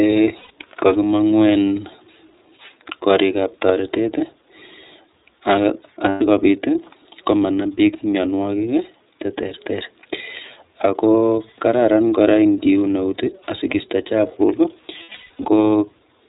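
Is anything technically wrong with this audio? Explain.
Yes. The whole clip runs through the iLBC codec, and it has lost iLBC frames three times.

The iLBC codec affects all of the speech. Nothing above 4 kHz survives, and the coding damage is plainly audible as a slightly rough, synthetic edge. iLBC codes each frame's excitation on its own, and this sound fits its 30 ms mode at around 13.3 kbps. A simple low-pass filter would dull the sound but not roughen it. The synthetic grain is what marks this as the codec.

Lost iLBC frames occur at 0.38 to 0.51 s and at 6.09 to 6.22 s. Each of these gaps lasts 120 ms. The decoder fills each one by repeating the last pitch cycle mixed with noise. The result is a brief held, buzzy, breathy vowel, not silence. From 15.03 to 15.45 s, 300 ms of losses are scattered across 420 ms. The longest run there is about 150 ms, and the concealment fades during it. 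A hard dropout would sound like a gap or a click. Here the voice recovers right after each loss because iLBC frames don't depend on earlier ones, and that quick recovery is what points to iLBC concealment.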